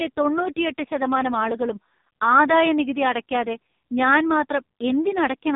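From start to finish the speech sounds buzzy, thin and synthetic, with nothing above about 3.8 kHz, so sibilants lose their edge and the voice has a boxed-in, telephone quality. This is heavy damage from the AMR narrowband mobile codec. It samples at 8 kHz and rebuilds the voice from a vocal-tract model excited by a few pulses per 5 ms subframe. The strong buzziness fits one of its lowest modes, around 5 kbps.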